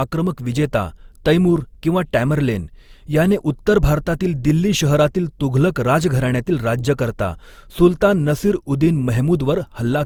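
From start to end, the speech carries generation loss. The sound is swirly and smeared, with a hollow, phasey quality. Consonant attacks are blurred rather than crisp. The damage is heavier than a single pass at one bitrate would give. The likely cause is repeated lossy coding, around four rounds, consistent with Opus at about 64 kbit/s. Each pass requantises on a shifted frame grid, so noise accumulates. Content still reaches about 20.3 kHz.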